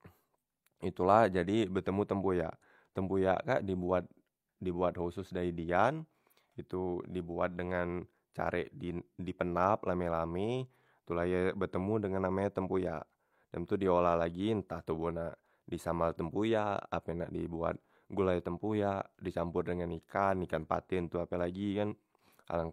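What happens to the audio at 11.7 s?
Nothing goes wrong at 11.7 s; the speech carries on intact through that moment.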